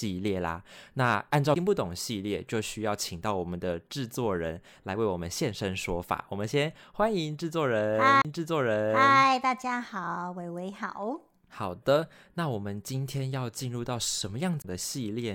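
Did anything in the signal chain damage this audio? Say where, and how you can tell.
Yes, at the playback stage: a CD skip at 1.54 s, 8.22 to 8.25 s and 14.62 to 14.64 s. Each is a tick with a mute of only a few tens of milliseconds, after which the speech picks up at a different point. The laser has jumped to another turn of the disc's spiral. A network dropout would leave a gap and then resume where it stopped, without that jump.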